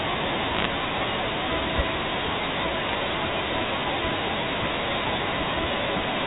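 Bit errors on a digital phone line flipped individual bits in the mu-law samples from 0.54 to 0.65 s and from 2.89 to 2.95 s, at well under one percent. Each sample hit on a high bit, or on the sign of a loud sample, becomes a sharp tick, and together they form brief bursts of crackle over the band-limited telephone speech.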